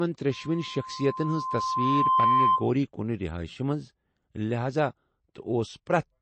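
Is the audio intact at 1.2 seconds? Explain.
No. At 1.2 s a loudspeaker feedback squeal is under way. It is a steady 1 kHz tone that starts at 0.31 s, swells over roughly two seconds until it sits around 10 dB above the sound itself, and stops at 2.68 s. At this moment it is still climbing. A microphone is picking up the speaker it feeds, and at 1 kHz the loop's gain exceeds one, so that frequency keeps reinforcing itself until the loop is broken.

Beneath the squeal the speech also has a watery, swirling quality, with nothing above 8.3 kHz, so the treble is dull and s sounds take on metallic chirps. This is plainly audible damage, likely from MP3 compression at a low bitrate in the region of 32 kbps. With so few bits, the encoder cuts off the high band outright and drops weak frequency components that flicker on and off from frame to frame.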